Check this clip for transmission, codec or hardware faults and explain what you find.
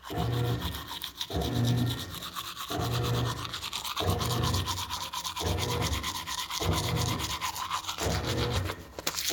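No faults turn up in this clip, so there is nothing to explain.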